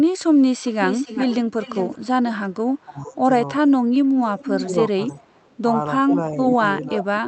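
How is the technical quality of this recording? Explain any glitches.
The recording is affected by two recurring call-processing faults: a leaking echo and a voice that gets turned down when both sides talk. The audio also passed through an Opus call path, which caps the high end at about 8 kHz.

Echo leak, 0.64–2.07 s, 4.39–4.67 s and 5.09–5.55 s: the likely cause is a far-end loudspeaker's echo canceller letting some of the pickup return. A copy trails 393 ms behind, about 10 dB down at first, then about 5 dB, then barely audible.

Speech suppressed in double talk, 1.98–2.23 s, 2.85–3.21 s, 4.66–4.99 s and 6.09 s to the end: this is likely an echo canceller mistaking overlapping talk for echo and ducking it. The voice dips roughly 10 to 20 dB in pieces, with the deepest dip at the close.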